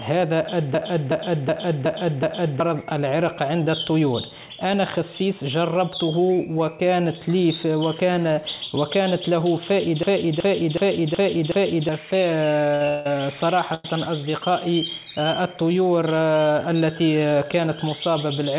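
The audio passes through a narrowband call path, with nothing above 4 kHz, which fits G.711 mu-law. A system hang loop strikes twice, from 0.74 to 2.60 s and from 10.03 to 11.89 s. Each time, one piece of about 0.37 s repeats exactly five times, a stutter at 2.69 Hz. The machine froze while the sound hardware kept replaying its ring buffer, which fits a 16384-sample buffer. About two seconds of real audio vanish each time. Short stalls from late packets follow at 12.75 s for 55 ms, at 12.85 s for 21 ms, and at 13.74 s for 99 ms. A packet arrived late and the jitter buffer ran dry. The last sound was held until it came, so each spot drags briefly. Nothing is lost. Between 12.88 and 13.06 s, a call audio freeze stretches the sound for 178 ms with no silence. The likely cause is delayed packets emptying the jitter buffer. Playback then resumes where it stopped. From 16.73 to 17.65 s, a jitter buffer speed-up runs the audio at 107% without changing pitch. 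The receiver trimmed about 70 ms in small slices to cut built-up delay, so that stretch sounds hurried.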